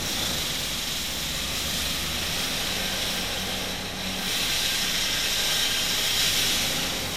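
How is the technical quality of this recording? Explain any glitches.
The technical quality is compromised by one fault, present for the whole clip. Throughout, the sound is swirly, smeared and hollow, with blurred attacks and content reaching up to about 20.1 kHz. This is generation loss, likely from around ten successive lossy encodes, which fits a WMA chain near 96 kbit/s. Each pass requantised on a shifted frame grid, piling up noise.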